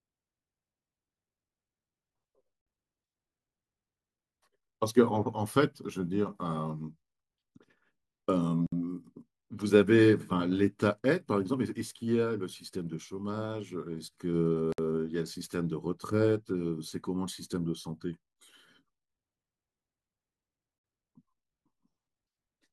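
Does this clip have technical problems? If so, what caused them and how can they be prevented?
Yes. There is a gap at a join of encoded pieces at 8.67–8.72 s and 14.72–14.78 s. Each 59 ms gap interrupts the speech, then it resumes. Each piece kept its encoder delay and end padding. Trim both before joining, or encode in one pass.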